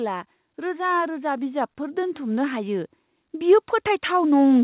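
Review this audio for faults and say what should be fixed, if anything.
Automatic gain rising from 0.55 s to the end at 4.63 s: the gain control judged the input too quiet and kept raising its level, so the speech and the background swell together steadily instead of holding a constant loudness, all within a narrowband call sound that stops at 4 kHz. To prevent it, set the microphone input level properly at the source, or limit how fast and how far the automatic gain control may increase its gain.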